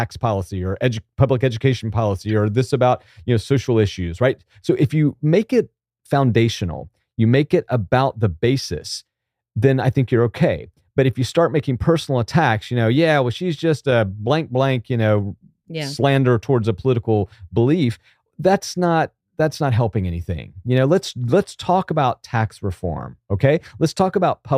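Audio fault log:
2.29–2.32 s and 13.91 s, corrupt frame decoded: damaged compressed frames got played anyway, so misread data throws energy into the wrong frequencies, giving quick blips, the later one louder.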